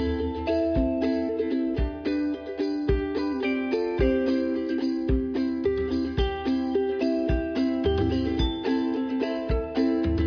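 Nothing here jumps out as a technical problem; the sound simply runs along without any glitch, dropout or hiccup worth pointing to.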